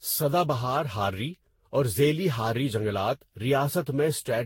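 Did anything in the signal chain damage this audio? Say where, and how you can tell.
Yes: generation loss at the codec stage, throughout the speech: swirly, hollow smearing, blurred attacks, nothing above 16.6 kHz, likely from around seven lossy re-encodes.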